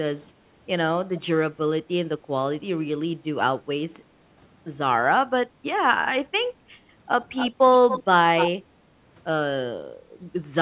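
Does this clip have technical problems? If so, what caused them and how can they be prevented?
Yes. There is echo leak: three short scraps of delayed speech at 7.36 to 7.5 s, 7.89 to 8.03 s and 8.37 to 8.51 s, each trailing the original by 282 ms. The first sits roughly 10 dB below the speech and the other two only about 5 dB below. The likely cause is a loudspeaker at the far end whose echo canceller let part of its microphone pickup through and sent it back. Prevent it by using a headset at that end or by tuning the echo canceller there.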